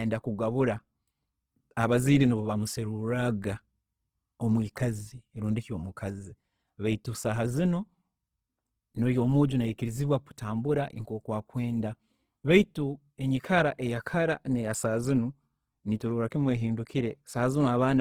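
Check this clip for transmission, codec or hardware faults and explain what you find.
There is one fault, and it runs through the whole clip. Opus compression is the likely cause. The speech sounds rough and grainy. Starved bands are filled with folded or noisy content rather than left empty. Bandwidth stays full, to about 20.3 kHz. The damage is plainly audible and fits a low rate near 16 kbps in music mode.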